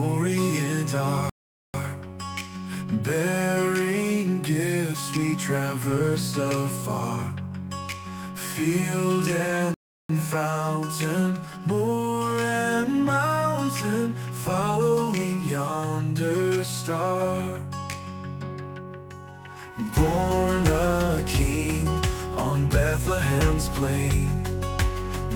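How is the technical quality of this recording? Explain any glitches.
Two rebuffering stalls interrupt the audio. At 1.30–1.74 s and 9.74–10.09 s the player ran out of buffered data, cutting to silence for 0.45 s and 0.35 s before resuming exactly where it stopped.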